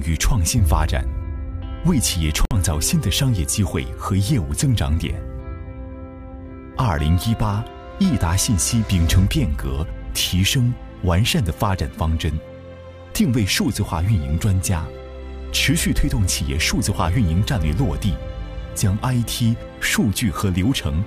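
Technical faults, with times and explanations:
2.45–2.51 s, gap at a join of encoded pieces: two separately encoded segments were spliced without trimming, so the encoder's start-up delay and the padding on the final frame of the earlier piece both remain in the stream. The result is a silence of about 58 ms dropped into otherwise continuous sound, with its edges smeared by the codec, after which the audio resumes exactly where it left off, as if briefly paused rather than cut.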